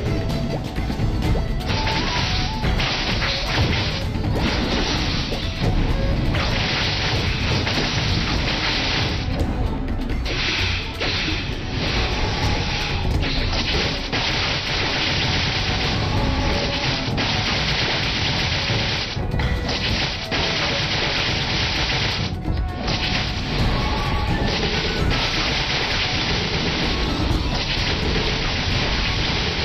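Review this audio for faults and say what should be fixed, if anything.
Nothing here needs fixing; no faults were found.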